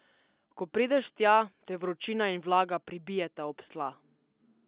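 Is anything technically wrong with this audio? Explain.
No, nothing here is faulty: the speech is carried by A-law G.711 telephone coding, whose 4 kHz ceiling and faint level-following quantisation hiss are normal for that format.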